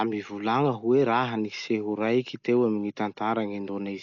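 From start to end the speech is cut off above 6.9 kHz and heavily damaged, sounding dull with a rough, fluttering noise around tones. This is likely Dolby Digital compression at a very low bitrate, which fits about 48 kbps, with bit-starved frequency lines filled by dither noise.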